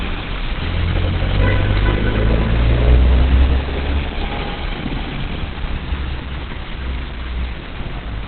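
From start to finish the sound is dull and boxed-in, with nothing above about 4.3 kHz. The top end is simply gone. What remains is hoarse and smeared, with heavy damage throughout. The cause is likely Opus compression at a very low rate. The encoder appears to have dropped to its narrowband speech mode, which fits a bitrate near 12 kbps. That mode throws away the highs and models the rest coarsely.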